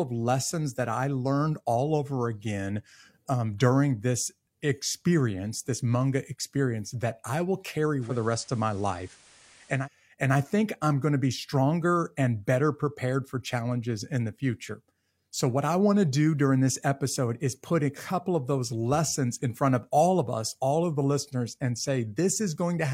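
From 7.98 to 9.88 s, digital radio blends to analogue FM over 185 ms. Hiss rises, and level shifts about 1 dB.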